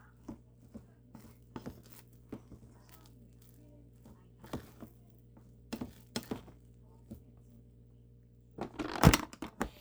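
A recording of sounds carries overlap-add ripple from start to finish. Reassembled frames do not sum evenly, so the level dips by about 6 dB once per frame, around 300 times a second. That rate gives a buzzy, robotic roughness rather than a slow, musical tremolo.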